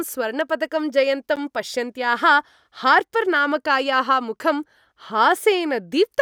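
At 1.36 s a block of digital silence about 10.7 ms long, fitting a missed 512-sample buffer, cuts the speech abruptly: flat waveform, blank spectrogram slot.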